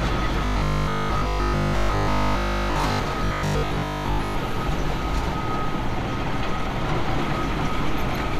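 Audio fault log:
0.46–3.00 s and 3.25–4.35 s, robotic sound from repeated short buffers: fresh audio is likely reaching the playback side too slowly, so the software keeps replaying its last fragment of about 20 ms while much of the real signal, roughly two thirds or more, is skipped. Those back-to-back repeats stamp a steady 50 Hz buzz onto the sound, turning it rigid and metallic, though its broad shape still loosely tracks the original.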